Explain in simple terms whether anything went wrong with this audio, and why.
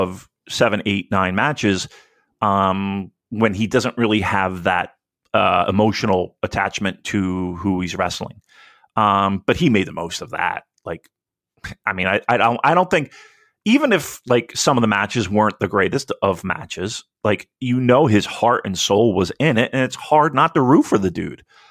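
Nothing went wrong with this audio, because no technical fault can be heard anywhere in it.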